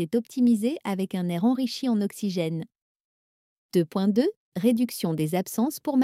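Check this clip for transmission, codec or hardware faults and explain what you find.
I found no faults anywhere in this clip.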